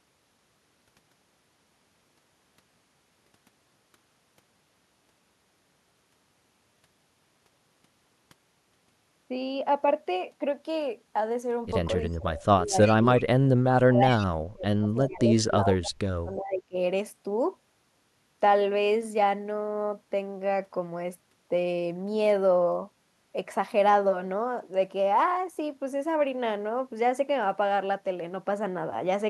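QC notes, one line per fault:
12.13–12.17 s, 12.85–12.95 s, 14.16–14.27 s: echo leak. Brief scraps of the speech return 342 ms late, the first barely audible, the later ones only about 15 to 20 dB below the speech. This is likely a far-end loudspeaker echo that the canceller failed to remove.
12.14–12.77 s, 12.96–13.48 s, 13.72–16.76 s: speech suppressed in double talk. The speech dips by about 25 dB at first, then by as much as 40 dB, for roughly three seconds in the last stretch. This is likely the echo canceller turning down its own talker along with the loudspeaker echo while the other side was playing.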